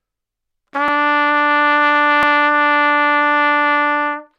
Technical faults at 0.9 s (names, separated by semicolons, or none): repeated buffer